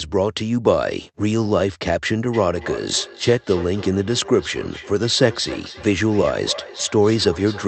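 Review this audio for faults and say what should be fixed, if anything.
Feedback echo between two devices runs from 2.34 s to the end of the clip. A second device in the same room is playing the call back out loud, and its sound loops into the first device's microphone. The local echo canceller only removes what its own speaker plays, so the speech returns roughly every 300 ms, thinner and ringing, at its loudest about 15 dB below the speech. This sits within the call audio's 8 kHz bandwidth.

To prevent it, mute or disconnect the second device's speaker, or have only one device join the call from that room.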